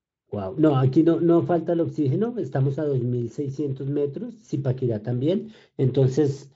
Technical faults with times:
none

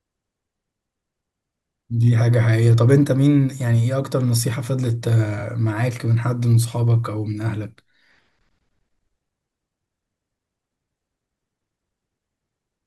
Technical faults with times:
5.38-5.43 frames out of order

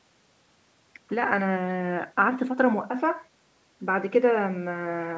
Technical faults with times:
none

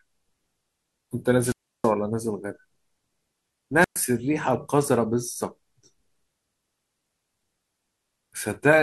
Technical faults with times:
1.39-1.93 wireless microphone squelch dropout
3.79-3.98 wireless microphone squelch dropout

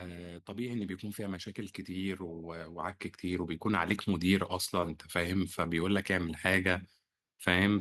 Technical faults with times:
0.45-6.44 automatic gain rising

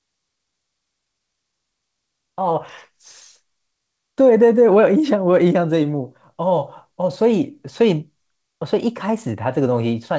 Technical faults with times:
none

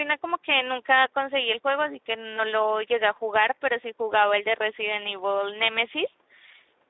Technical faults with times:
0.00-6.89 Speex codec

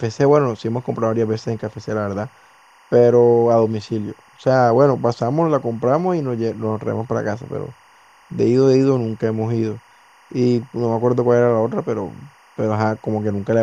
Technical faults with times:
0.00-13.62 timecode bleed

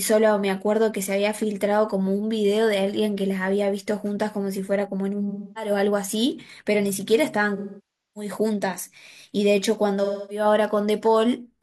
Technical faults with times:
0.14-11.46 word clock ticks
5.30-5.71 AAC frame loss with concealment
7.56-8.31 AAC frame loss with concealment
10.04-10.45 AAC frame loss with concealment

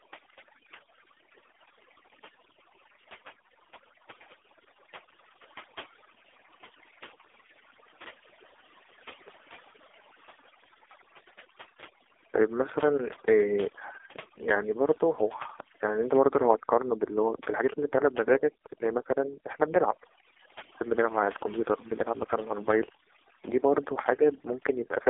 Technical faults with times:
0.00-25.09 overdone noise removal
0.00-25.09 AMR narrowband mobile codec

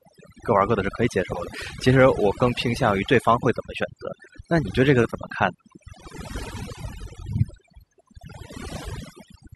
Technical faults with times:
0.00-9.55 overdone noise removal

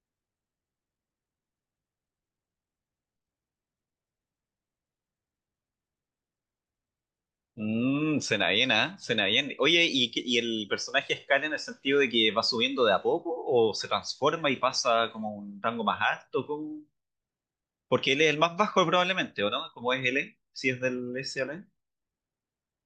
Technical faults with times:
none

